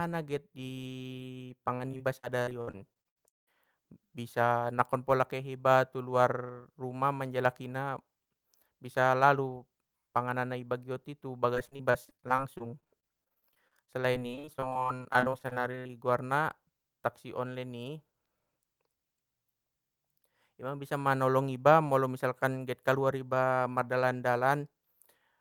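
From 1.45 to 3.49 s, packets kept going missing or arriving late, and each hole was patched by stretching the preceding sound. This repeated packet loss gives a choppy quality, with over a quarter of the stretch concealed and gaps up to 170 ms. From 11.55 to 15.91 s the losses return as dozens of shorter gaps, none over 42 ms, producing a rapid, choppy stutter across roughly a quarter of the span.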